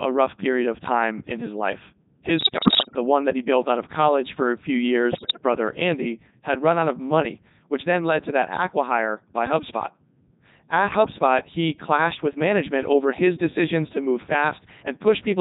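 Codec 2 vocoder, throughout the clip: the speech has been rebuilt from a handful of parameters per frame (pitch, voicing, energy and a coarse spectral envelope) rather than carried as a waveform. The decoder resynthesises each frame from sine waves, so the speech comes out heavily robotic and buzzy. The sound fits the codec's 3.2 kbit/s mode, its highest rate, yet the damage is still severe.

Bit errors on digital voice radio, from 2.38 to 2.96 s, between "time in his life" and "one that he built": about one bit in ten arrives flipped. Each corrupted bit throws off a whole frame's pitch, level or tone colour, so the synthetic voice lurches and warbles into bleeping gibberish. The same breakup returns, shorter, from 5.12 to 5.42 s, right after "college for a few," with the same erratic jumps in pitch and level.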